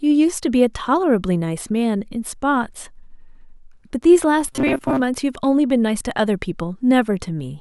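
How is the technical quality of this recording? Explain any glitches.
One glitch stands out. From 4.48 to 5.01 s the speech turns into a rigid, metallic buzz at 133 Hz, still loosely tracking the words. This robotic sound is likely from repeated short buffers: about half the audio is replaced by repeats of a roughly 7.5 ms chunk, whose repetition rate imposes that fixed pitch.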